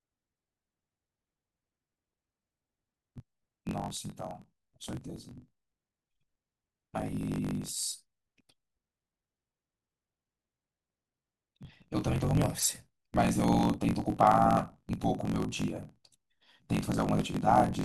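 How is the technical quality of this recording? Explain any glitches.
The recording has a clear technical fault running from start to finish: a block size mismatch (truncated). Throughout the speech, a steady buzz sits at about 46.9 Hz, and everything plays roughly 1.12 times too fast while the timbre stays. One stage writes longer blocks than the next reads, which fits a 1024-sample read size, so each block's tail is discarded. That produces the buzz and the speed-up. Unlike simple resampling, the timbre is kept.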